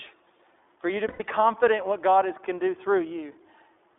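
iLBC codec, throughout: the speech is confined to a narrowband telephone band of roughly 300 Hz to 3.5 kHz. Each 20 ms frame is coded on its own, and the plainly audible roughness and synthetic edge fit iLBC at 15.2 kbps.

Lost iLBC frames, 1.08 to 1.22 s: between "for you to" and "confident what", about 120 ms of audio goes missing, which fits six dropped 20 ms frames. The decoder fills the gap by repeating the last pitch cycle blended with noise, giving a held, buzzy vowel. The voice is right again almost immediately afterwards.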